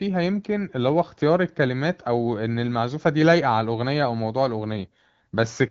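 No technical faults are audible.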